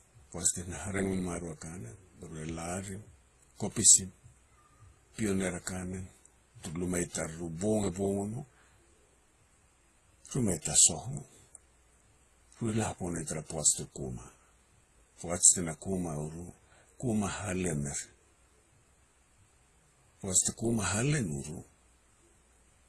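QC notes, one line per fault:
Throughout: transcoding between lossy codecs. The sound stops dead above 12.2 kHz, and two different kinds of smeary, warbling artefact are heard together. That likely points to a low-rate WMA encode, around 32 kbit/s, squeezed again through Opus at about 24 kbit/s.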